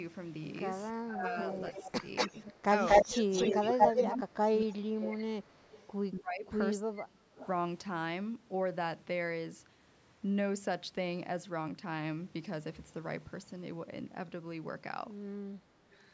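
From 0.92 to 7.32 s the speech is repeatedly ducked, dropping by up to about 30 dB for about three seconds in total. This is speech suppressed in double talk, likely an echo canceller that couldn't tell the near talker from loudspeaker echo and attenuated both.

Overlapping this, from 1.5 to 5.88 s, an echo leak brings back a copy of the speech delayed by 236 ms and about 5 dB louder than the speech itself. The same fault returns briefly at 7.37 to 7.47 s and at 15.91 to 16.04 s, each time with a 308 ms delay. The first of these is about 20 dB down and the second is about 35 dB down. The likely cause is a loudspeaker on one side of the call whose echo canceller let part of its microphone pickup through.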